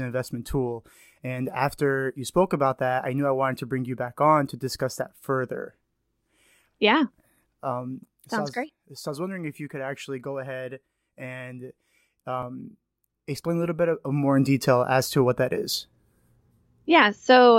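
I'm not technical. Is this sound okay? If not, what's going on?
No. From 13.91 to 14.43 s, after "explain a little bit", there's zipper noise: the volume moves in about 100 tiny jumps a second, so it buzzes instead of changing smoothly.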